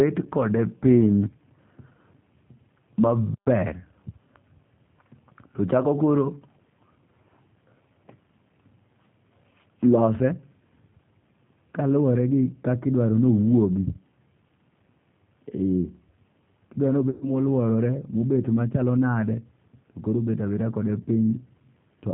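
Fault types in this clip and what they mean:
G.729 codec: The whole clip runs through a low-bitrate speech codec at 8 kbit/s that rebuilds the voice from a vocal tract filter, a pitch predictor and a few pulses per frame, rather than storing the waveform itself. The damage is plainly audible as a rough, slightly synthetic quality in the voice. Unlike a simple telephone-band filter, which only dulls the top end, this adds a grainy, model-made texture to the voice itself, and nothing above 4 kHz survives.
VoIP packet loss concealed by the speech codec: From about 17.10 to 17.30 s, about 110 ms of audio never arrived, which fits eleven of the codec's 10 ms frames. The decoder filled the hole by repeating its last pitch and vocal tract shape at falling gain. What you hear is a smeared, buzzy or noisy continuation of the preceding sound that fades. A plain dropout would cut to silence instead. 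The voice stays weak or distorted for a moment after the gap ends while the decoder recovers.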